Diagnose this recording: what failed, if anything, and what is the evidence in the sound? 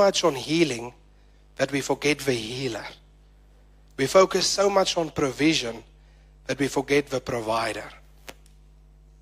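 A steady, raspy mains buzz sits under the speech from the start until about 4.29 s, ending just before "so much on provision". It is faint, roughly 40 dB below the speech. The fault lies in the analogue wiring. A dimmer, rectifier or poorly shielded cable let sharp switching spikes from the 50 Hz supply into the signal twice per cycle, spreading harmonics of 50 Hz well up into the kilohertz range.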